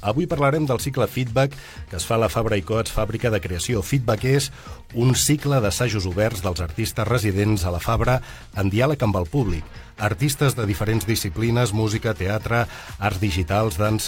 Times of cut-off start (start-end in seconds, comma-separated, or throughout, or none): none